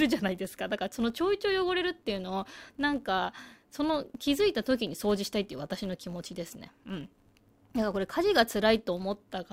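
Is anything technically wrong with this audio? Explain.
Yes. Throughout this speech, a filter restarted on every block resets to silence each block. Each restart adds a small transient, heard as a 100 Hz buzz following the speech level.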